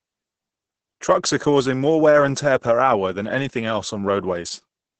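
The clip is speech with Opus voice compression from start to finish. Nothing is heard above about 8.9 kHz, so the top of the band is simply missing. The voice sounds muffled and hoarse, with a slightly robotic edge. The damage is heavy. This points to the SILK voice coder running at a very low rate, around 10 kbps. At that rate the excitation is coded coarsely in 20 ms frames, and the natural grain of the voice is lost.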